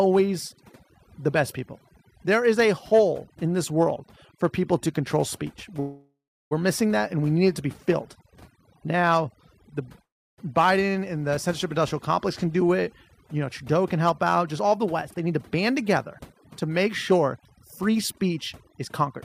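Throughout the clip, overdone noise removal clears the background into twinkling, warbling specks and takes quiet parts of the speech with it. Real noise suppression would be steadier. At 5.80 to 6.53 s a call audio freeze adds about 0.71 s: the last sound is carried on briefly, then about 0.34 s of silence follows, likely from a drained jitter buffer. A second freeze at 10.03 to 10.40 s adds about 0.35 s, mostly silence lasting about 0.31 s. Unlike a dropout, both freezes insert a gap without losing any speech. From 14.65 to 19.18 s a jitter buffer speed-up trims about a fifth of a second in small pieces. The speech runs at 105% speed with unchanged pitch and sounds hurried rather than raised.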